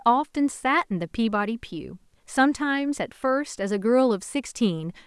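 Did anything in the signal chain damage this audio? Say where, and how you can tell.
No, the signal chain shows no damage.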